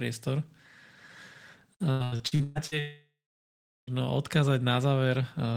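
Repeated packet loss (robotic sound) runs from 1.91 to 2.74 s. Seven short gaps, up to 119 ms long, are patched by continuing the last sound, so about half the stretch turns choppy with pieces missing.

A long network dropout likely follows from 2.79 to 3.90 s. A fading buzz or hiss continues the last sound, then about 0.76 s of silence, and the speech returns with roughly 1.1 s missing.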